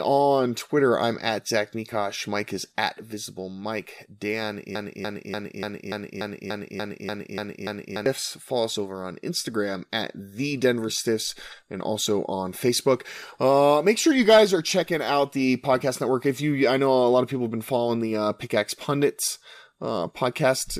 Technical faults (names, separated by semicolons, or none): broken-record loop